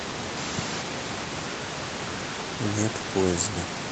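No faults: the speech arrives over a call path with nothing above 8 kHz, and the room noise sits about 9 dB below it, both normal for this chain.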